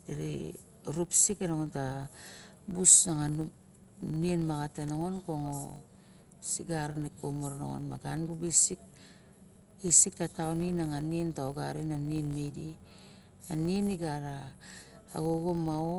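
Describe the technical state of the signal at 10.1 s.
At 10.1 s, as across the whole clip, the speech is dull and band-limited, with a rough, fluttering noise clinging to voiced tones. That points to likely Dolby Digital compression at a low rate, which fits 64 kbps; unlike a plain low-pass, the missing detail returns as noisy fill rather than clean silence.

A steady 46.9 Hz buzz also runs under the speech, rising and falling with its level. This is a filter restarted on every block, fitting a 1024-sample block, where each block opens with a small transient. Unlike mains hum, it disappears when the sound stops.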